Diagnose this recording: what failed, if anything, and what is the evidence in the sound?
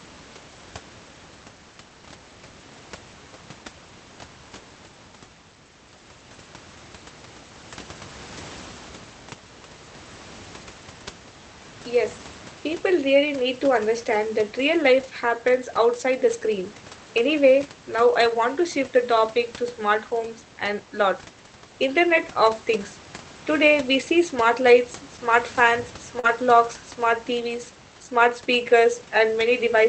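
At the network stage, single packets were dropped on four occasions, and each was recovered by the decoder as a lost packet rebuilt from error correction. The next packet carried a low-bitrate copy of the missing one, so there is no silence. Instead there are 20 ms stretches of rougher, noisier speech at 8.37–8.39 s, 15.03 s, 18.13–18.15 s and 26.23–26.25 s. Each is a coarser redundant encoding played in place of the lost frame.

A second network failure, a short concealed packet loss, runs from 26.19 to 26.25 s. About 40 ms of audio never arrived in time for playback. The receiver bridged the hole by extending the preceding sound, following its pitch where it was voiced and using shaped noise where it wasn't, then crossfading back into real audio. That synthetic fill is heard as a brief smear or wobble, and its final 20 ms coincides with the error-correction frame at 26.23 s.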